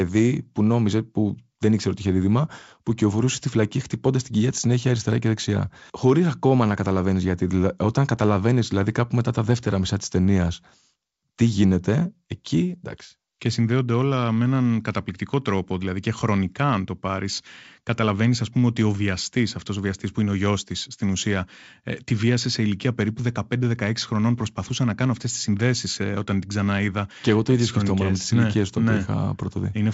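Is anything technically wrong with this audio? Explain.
No, nothing is technically wrong: the speech sounds like ordinary G.722 wideband telephone audio, reaching up to about 7 kHz, with at most a faint hiss from the coding in the upper band.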